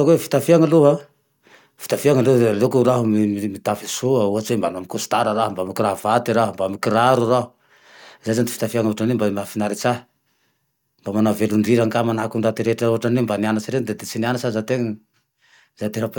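No technical faults are audible anywhere in the speech recording.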